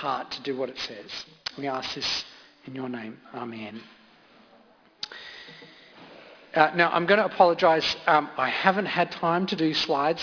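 Aliasing runs through the whole clip: content above 5.5 kHz folds back into wrong, gritty tones, which points to an unfiltered drop to about 11 kHz sampling.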